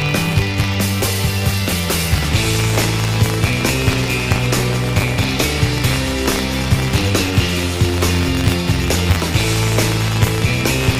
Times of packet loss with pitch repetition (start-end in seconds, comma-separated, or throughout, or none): none